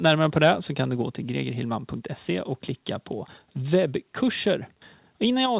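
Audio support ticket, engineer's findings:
Harsh, crackling edge on loud peaks at 0.05–0.12 s (about 3 dB over full scale) and 0.42–0.50 s (about 4 dB over). Likely microphone overload: input gain too high, converter flattening waveform tops. A few percent of samples clipped in each burst, adding hard distortion.

Sudden drop of about 4 dB in speech and background together at 1.02 s, again at 5.46 s. No fade, single step each time. Likely microphone volume stepped down by call software's gain control after the early clipped peaks, cutting device input level in one move.

Call path band-limited: no content above 4 kHz, consistent with narrowband telephone coding.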